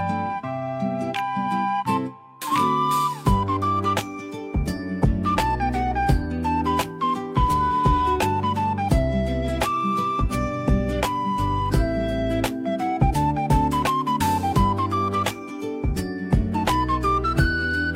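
No technical faults can be heard anywhere in this audio. There are no dropouts, glitches or interruptions at any point.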